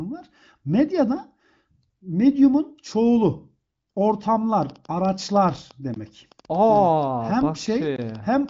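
From 4.63 s to the end of the clip, a train of clicks appears, most likely from interference or a faulty connection injecting pulses. About seven similar ticks per second arrive at an uneven pace, roughly thirty in all, peaking near the level of the speech and audible in pauses too.

At 7.96 s, a gap between chunks occurs: codec padding or the player left 20 ms of silence at a join, which fits audio handled in 2-second chunks. It sounds like a brief hole in the speech, while the AMR wideband band still tops out around 7.7 kHz.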